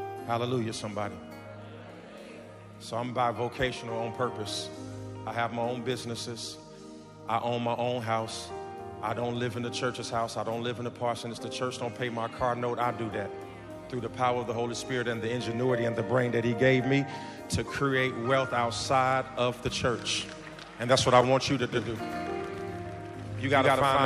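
At 21.72 s a doubled audio track begins abruptly and runs to the end. A second full-band copy trails the original by about 150 ms, at nearly equal level. There is no decay or room colour. A slower second capture path is the likely cause.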